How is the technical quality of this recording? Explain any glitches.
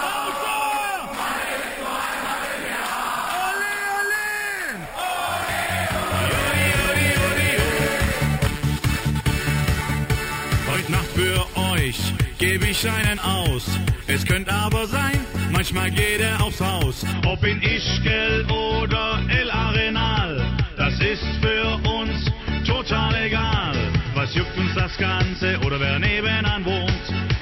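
The first 17.13 seconds carry a clear fault: imaging from sample-and-hold upsampling. From 0.0 to 17.13 s a bright, metallic fizz rides on the sound, rising and falling with its level, and its lowest component moves opposite to the pitch. The audio was raised from 12 kHz to 48 kHz by holding each sample four times without a smoothing filter. That leaves mirrored spectra around multiples of 12 kHz, the lowest filling 6 to 12 kHz at about 14 dB below the signal.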